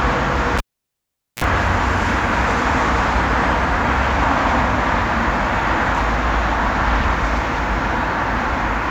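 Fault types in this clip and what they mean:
Cable pulled and plugged in: a live lead is pulled and reinserted, with a pop at 0.58 s, 815 ms of near-flat waveform, 47 ms of 60 Hz buzz as the tip touches, and a second pop at 1.44 s. On a spectrogram, broadband lines bracket a 60 Hz harmonic stack.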